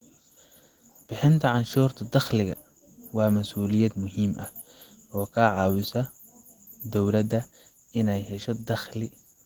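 Throughout, the speech sounds hoarse and muffled, with plainly audible codec damage. This is likely Opus compression in its hybrid speech mode, which fits a bitrate near 16 kbps.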